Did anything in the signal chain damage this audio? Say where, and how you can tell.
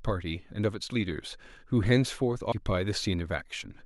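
Yes. At 2.51 s the speech is hit by a brief blip, the mark of damaged data in a compressed stream. Corrupt bytes make the codec misread a frame and resync at the next header.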